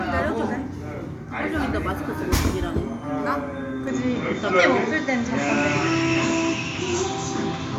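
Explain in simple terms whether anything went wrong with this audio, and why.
Something went wrong at 3.87 seconds: the recording system most likely switched its input to a poorer device, such as a different microphone or a headset. From that point to the end, the sound loses its top end, with nothing above about 7.5 kHz, so it turns duller and boxier. The level shifts, and a faint new background noise appears underneath. The change is instant, with no gap at the switch.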